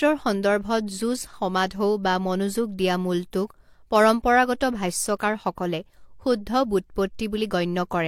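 No technical faults can be heard anywhere in the speech.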